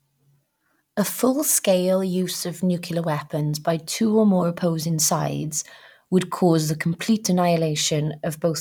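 A speech recording with no technical faults to report. Nothing in it calls for a time or a cause.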